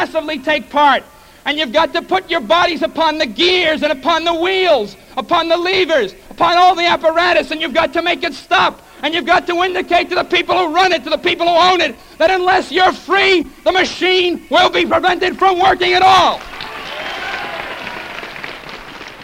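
No audible technical faults: level, timing and continuity hold steady throughout, with nothing to flag.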